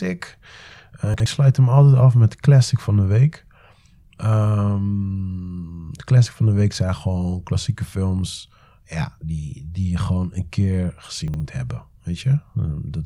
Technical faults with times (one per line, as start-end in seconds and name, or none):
1.14-1.26 chunks out of order
11.28-11.40 chunks out of order